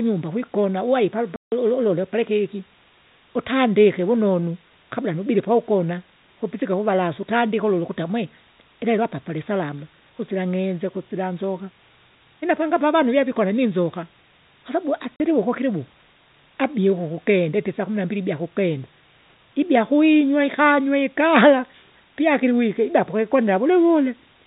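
Low bit depth with dither runs through the whole of this speech recording: it sits at 8 bits, and the dither turns the rounding error into a steady, even hiss roughly 30 dB below the signal, with no distortion on loud passages. Packet loss filled with silence strikes from 1.36 to 1.52 s, right after "kwikona uwai palipa", and again from 15.16 to 15.20 s. The 160 ms and 40 ms holes cut in and out with hard edges, and their lengths fit 20 ms packets going missing. Above 4 kHz nothing is present, consistent with G.711 telephone coding carrying the call.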